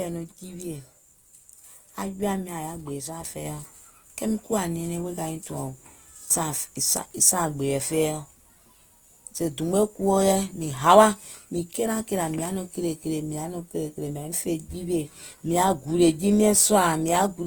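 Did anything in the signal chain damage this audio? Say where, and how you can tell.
Yes. Opus compression at the codec stage, throughout: the speech is rough and grainy, with tones turned noisy, though the bandwidth stays full to 20.1 kHz. This is likely CELT mode filling bit-starved bands with folded or noise energy, consistent with about 24 kbps.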